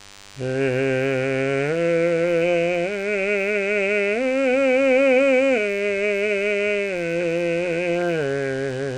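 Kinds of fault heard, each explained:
DECT cordless phone buzz: a nearby DECT handset or base station transmits a short radio burst every 10 ms, and the audio circuitry rectifies it into the signal. Across the whole music clip this adds a thin, steady 100 Hz buzz rich in harmonics, sitting roughly 25 dB below the music.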